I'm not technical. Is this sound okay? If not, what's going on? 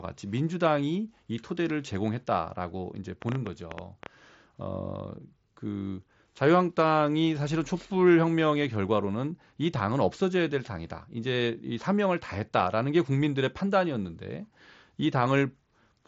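No. A train of clicks runs from 3.22 to 4.07 s: about ten uneven ticks, roughly 9.5 per second, likely from electrical interference or a faulty connection.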